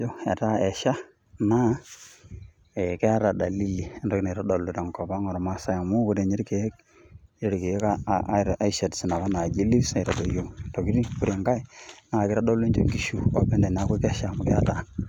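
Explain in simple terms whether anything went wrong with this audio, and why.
Nothing went wrong here: the speech comes through steady and unbroken, with no dropouts, glitches or odd sounds anywhere along the way.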